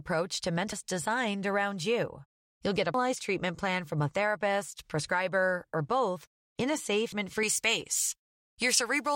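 At 0.72 s, just before "designed around you", a stretch of the compressed stream arrives with damaged data, so the decoder loses frame sync and hunts for the next header. It is heard as a chirp, squawk, click or short hole. The same damaged data in the compressed stream recurs at 2.94 s, just before "treatment plan from a", and again at 7.12 s, each a brief blip.

From 7.43 s to the end, pre-emphasis is left on: the treble boost applied for recording or transmission, consistent with a J.17 curve, is never undone by the matching de-emphasis. Highs stand about 11 dB above 1 kHz at 10 kHz, making the speech thin, bright and hissy on sibilants.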